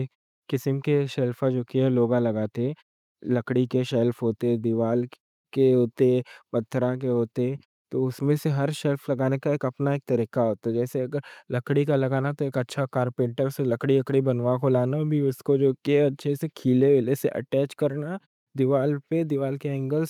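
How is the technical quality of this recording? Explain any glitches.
The technical quality of the recording is sound, with no glitches to explain.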